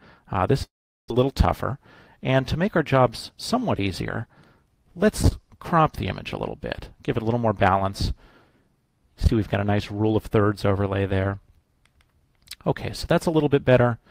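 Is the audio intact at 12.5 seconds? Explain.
Yes, the audio is intact at 12.5 seconds, with no dropout, click, distortion or other fault audible at that moment.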